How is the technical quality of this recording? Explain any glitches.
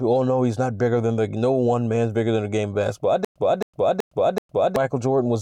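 A stutter with silent gaps disrupts the speech from 3.25 to 4.76 s. The same 0.27 s fragment plays four times, each followed by about 0.11 s of dead digital silence, repeating every 0.38 s. This is likely a stalled stream or player that replayed its last buffered fragment at each retry before running empty, so the audio meant for that stretch is lost. The repeated fragment and the true silence between repeats set it apart from a plain dropout.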